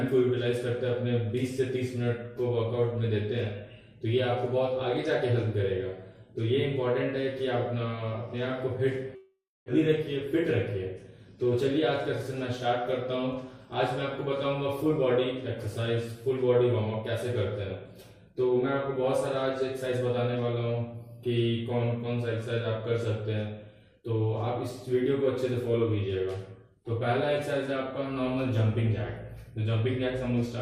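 At 9.15 s the audio is cut off and, until 9.70 s, replaced by a fill that stretches the last sound into a fading buzz before settling into about 260 ms of near-silence. Roughly 400 ms of material never returns, and the timing shifts by about a tenth of a second. This points to a long network dropout as the likely cause. On a spectrogram, the harmonics smear into a blurred band that thins to an empty gap, and the waveform shrinks to a flat line before resuming mid-stream.

From 10.96 to 11.54 s comes a jitter buffer speed-up: the receiver, holding excess buffered audio after the gap, trims repeated slivers of one or a few pitch periods to catch up. Playback runs at about 112% speed with pitch unchanged, so the sound feels briefly rushed, and around 70 ms is removed in total. The waveform shows periodic cycles spliced out, with the events packed closer together. On a spectrogram, the harmonic lines stay at the same height but their features appear compressed in time.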